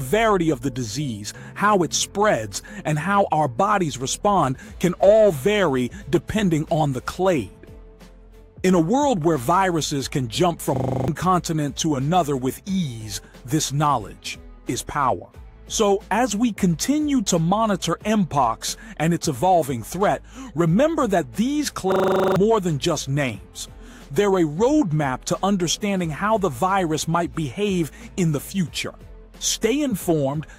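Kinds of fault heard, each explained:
System hang loop: the system froze and the hardware kept replaying one 40 ms buffer, giving a 25 Hz rattling stutter at 10.76 s and 21.92 s.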